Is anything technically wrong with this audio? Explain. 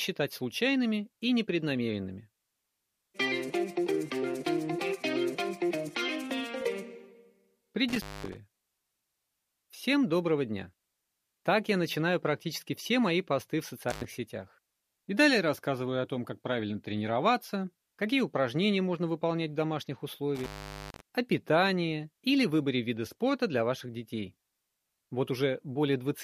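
Yes, there's an intermittent contact at 7.9–8.4 s, 13.9–14.0 s and 20.4–21.0 s: a loose cable or plug briefly opens, dropping the sound for about 0.22 s, 0.10 s and 0.44 s, with crackle at each edge and faint hiss underneath.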